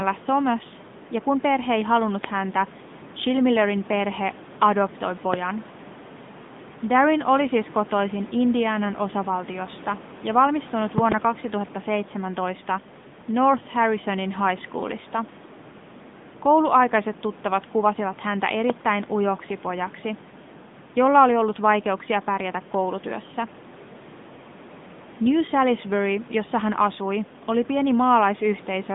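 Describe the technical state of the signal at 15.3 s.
At 15.3 s the speech carries the AMR narrowband mobile codec, present across the whole clip. Nothing passes above about 3.7 kHz, and a buzzy, synthetic edge fits a mid rate near 10.2 kbps. Unlike a plain band-limit, the room noise, about 18 dB down, swirls and warbles.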